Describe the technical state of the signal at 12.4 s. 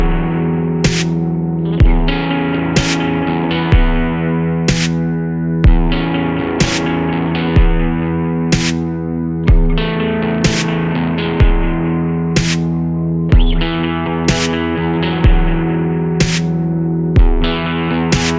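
At 12.4 s the signal is intact, with no audible fault at that moment.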